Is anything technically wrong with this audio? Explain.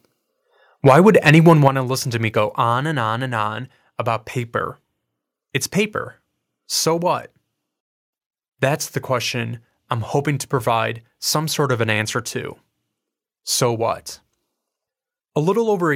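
Yes. From 0.86 to 1.68 s there is microphone overload. Peaks are flattened, about 5 dB over, on around one percent of samples. The likely cause is input gain set too high.

The microphone volume is stepped down at 1.68 s by about 7 dB, and at 15.93 s by about 2 dB. The level drops abruptly, likely as automatic gain control lowers the input.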